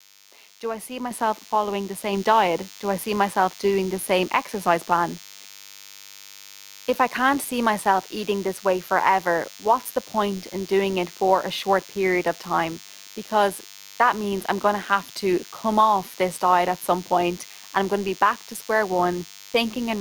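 Right from the start and all the way through, there's a DECT cordless phone buzz: a thin, steady 100 Hz drone full of harmonics, sitting roughly 20 dB under the speech. A nearby DECT handset or base is firing a radio burst every 10 ms, and the audio circuitry rectifies it into sound.

Then the microphone volume gets stepped up, twice. At 1.11 s, right after "I see" and just before "following the", everything jumps about 6 dB louder in one go, voice and buzz together. Again at 2.13 s, after "following the", there's another step of about 3 dB. That's the call software deciding the mic was too quiet and bumping the device's input gain in single steps rather than easing it up.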